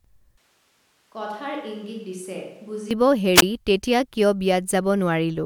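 From 0.38 to 2.91 s the speech turns hollow and roomy, about 10 dB quieter with thinner bass and more background. It's likely a switch to a distant microphone. At 3.36 s there's a wireless microphone squelch dropout: static rises, a roughly 16 ms hole mutes everything, then speech returns by 3.42 s.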